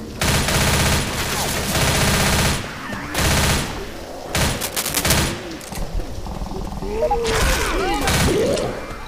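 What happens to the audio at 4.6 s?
From 4.55 to 5.14 s a dense, uneven scratching and rustling rides over the sound, only slightly quieter than the sound itself. This is cable scratch noise, likely from a worn cable, connector or control being moved, its contact resistance fluctuating rapidly.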